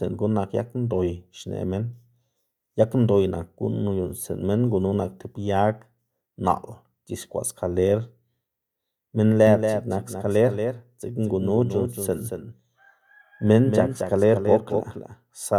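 At 9.47 s a doubled audio track begins and continues to the end of the clip: a second, full-band copy of the speech enters abruptly and trails the original by roughly 200 ms, sitting about 5 dB below it. The lag carries no decay or room colouring, so each syllable is followed by a flat, distinct restatement rather than reverberation. The likely cause is the same signal being captured a second time through a slower path and mixed back in.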